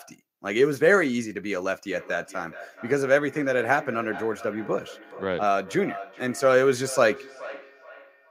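From 1.84 s to the end of the speech, feedback echo between two devices appears: a second device replays the audio and this microphone recaptures it, beyond the echo canceller's reach. Repeats arrive roughly every 0.4 s, peaking about 17 dB below the speech, each thinner and more ringing.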